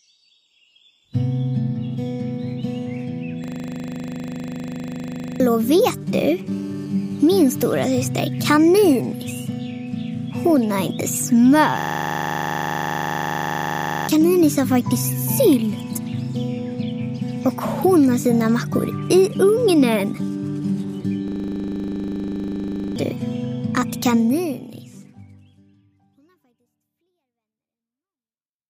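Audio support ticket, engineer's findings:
System hang loop: rapid 25 Hz stutter-buzz, 3.44–5.40 s, 11.8–14.08 s, 21.28–22.96 s. Driver/OS stall; DAC kept replaying one 40 ms ring buffer (49, 57, 42 repeats), which fits a 40 ms buffer. Roughly 2 s, 2 s and 1.5 s of audio lost.

GSM signalling bursts: galloping dit-dit-dit ticks and short raspy 217 Hz buzzes, 5.60–6.41 s, roughly 30 dB under programme. Nearby 2G handset signalling to the network; the audio input stage rectifies the intermittent RF bursts.

GSM phone buzz: hard, harmonic-rich 217 Hz rasp, continuous at 6.51–8.08 s, about 30 dB below programme and unrelated to it. Same 2G handset now in a call, transmitting steadily at 217 bursts per second; the pulses are rectified into the audio path.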